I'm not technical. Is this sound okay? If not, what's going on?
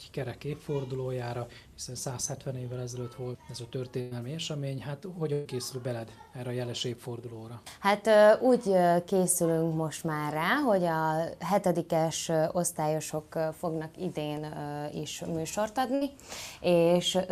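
No. There are three bursts of packet loss, at 4.01–4.13 s, 5.33–5.47 s and 15.95–16.03 s, each about a tenth of a second or less. Instead of going silent, each gap is filled with a brief held or fading sound, then the audio jumps ahead with a small piece missing.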